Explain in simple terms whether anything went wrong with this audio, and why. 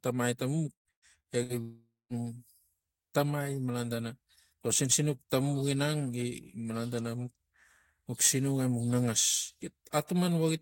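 From 0.73 to 1.52 s there is repeated packet loss (robotic sound). Four gaps, the longest 115 ms, were patched by stretching the previous sound, leaving the speech choppy and mechanical.

From 1.61 to 2.13 s the speech gives way to a fading buzz and then about 0.2 s of silence before returning with a piece missing. This is likely a long network dropout.

Hard clipping occurs from 8.22 to 8.30 s and again at 9.98 s. The loudest peaks exceeded what the signal path could carry and were cut flat, causing a brief crackle.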